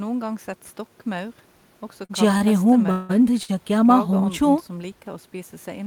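Short stalls from late packets occur in this speech clip at 2.05 to 2.11 s, 2.37 to 2.42 s and 3.43 to 3.50 s. Each time a packet missed its slot, the jitter buffer ran dry and the receiver stretched the last sound by 39 ms, 30 ms and 52 ms respectively before resuming from the same point, so nothing is lost but a sound is briefly held with a slight buzz or dip. A call audio freeze runs from 2.91 to 3.11 s, where the sound is drawn out into a fading buzz or hiss for 178 ms without dropping to silence, then picks up exactly where it stopped with no audio missing. The likely cause is a run of packets delayed in transit that emptied the jitter buffer. Each of these events pushes the rest of the audio later by the length of the fill.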